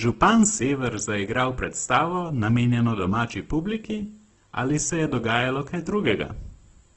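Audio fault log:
Throughout: USB whine. A thin, steady tone sits at 8 kHz under the speech, about 45 dB below it. Current drawn in 125 microsecond USB microframes leaks into the audio through power or ground. That fixed frame rate gives the whine its unchanging pitch.
Throughout: Opus compression. Nothing sounds above about 8.1 kHz, so the speech is held to wideband. Sounds come out grainy and rough rather than clean. This is likely a low-rate Opus encode near 12 kbps in its music mode, filling starved bands with noise.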